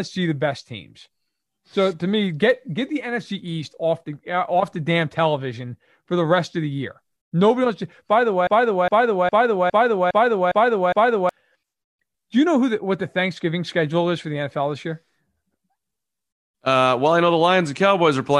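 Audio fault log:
8.47–11.29 s, broken-record loop: a fragment of speech about 0.41 s long repeats exactly, back to back, seven times, so the same short sliver of sound stutters for nearly three seconds before the clip moves on. This likely comes from a stalled player, encoder or stream that kept re-sending the last chunk it held. Whatever speech belonged in that stretch never arrives, so it is lost rather than merely delayed.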